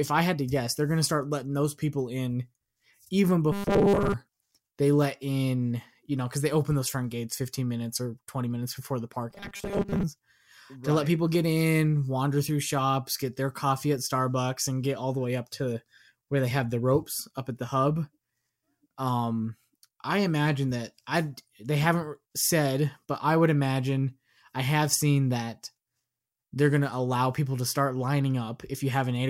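Robotic sound from repeated short buffers at 3.52 to 4.14 s and 9.31 to 10.03 s: the speech turns into a rigid 200 Hz buzz, likely from a 5 ms buffer repeating while most new audio goes missing.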